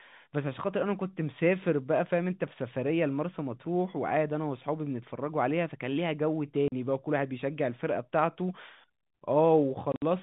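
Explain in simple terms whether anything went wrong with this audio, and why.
Packet loss filled with silence cuts this telephone-quality speech twice: a 40 ms hole at 6.68 s, which fits two lost 20 ms packets, and 80 ms of gaps scattered between 9.92 and 10.02 s, the longest 60 ms. Silence replaced the missing audio, so each hole has hard edges.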